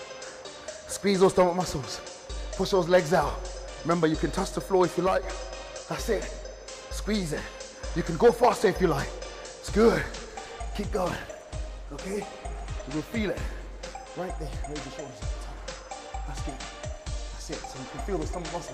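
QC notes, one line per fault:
5.07–5.23 s, one channel drops out: for about 0.16 s the level falls abruptly by about 6 dB, then returns just as suddenly. The likely cause is one stereo channel going silent briefly before the mono fold-down. Material common to both channels survives at half amplitude, which produces the step in level.
10.97–15.61 s, call bitrate drop: the sound turns coarse and loses top-end brightness. It takes on a rough, watery, muffled quality before clearing again. This fits the encoder being pushed from around 96 kbps down to about 25 kbps after the call's bandwidth estimate fell. Fewer bits mean coarser quantisation and a lowered upper band limit. The worst stretch lasts about 2.3 s before quality climbs back as the bitrate recovers.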